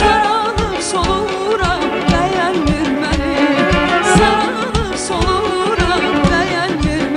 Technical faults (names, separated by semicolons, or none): mains buzz